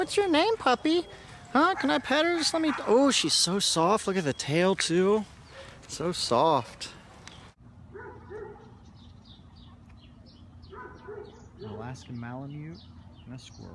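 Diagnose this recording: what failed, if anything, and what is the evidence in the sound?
Nothing failed; no faults heard.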